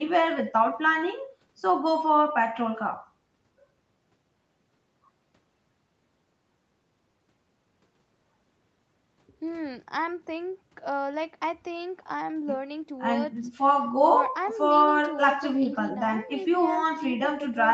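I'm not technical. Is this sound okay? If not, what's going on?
Yes, no faults here.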